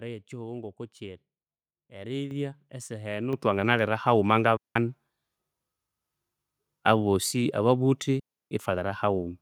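At 2.31 s, right before "esaha enu ithwanginalira haghuma", the level jumps by about 8 dB. At 3.33 s, between "esaha enu" and "ithwanginalira haghuma", it jumps again by about 5 dB. This is the microphone volume being stepped up: the input level of the capture device was raised in discrete steps because the signal was judged too quiet. The change is instant, and the room background rises along with the speech. That sets it apart from a compressor or gradual automatic gain, which would ride the level smoothly.

From 4.57 to 4.76 s the sound drops into a hole of near silence for about 186 ms. A longer one of about 318 ms runs from 8.19 to 8.51 s, just after "abosi ababuthi". These are digital wireless dropouts: the radio link lost too much data and the receiver muted with a very brief fade. Unlike an analogue wireless dropout, there is no hiss or noise burst at either edge, only a clean gap.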